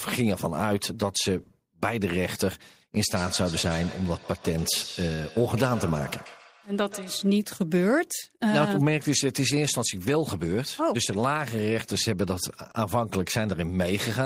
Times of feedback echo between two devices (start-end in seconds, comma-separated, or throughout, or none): 2.96-7.41